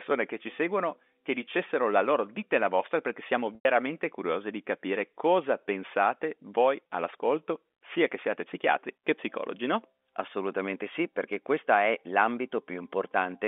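Packet loss with pitch repetition occurs at 3.55 to 3.65 s and again at 6.87 to 6.89 s. In each gap, audio packets failed to arrive, and the receiver filled the hole by looping the last pitch period of the speech. The first gap lasts 100 ms, so the repeated cycle turns into a brief buzzy hold that fades before the speech returns. The second is only 20 ms and sounds like a slightly held, buzzy note. Both lengths fit 10 ms packets. The G.711 telephone band around them stays clean.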